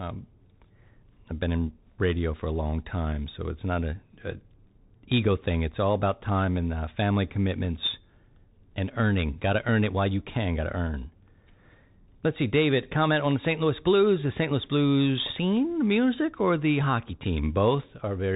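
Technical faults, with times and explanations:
Throughout, Bluetooth CVSD headset codec: nothing above 3.8 kHz survives, so the speech is narrowband and muffled. Each sample is coded as a single up-or-down step whose size adapts, so loud high sounds outrun it and distort, s sounds turn scratchy, and granular hiss sits beneath.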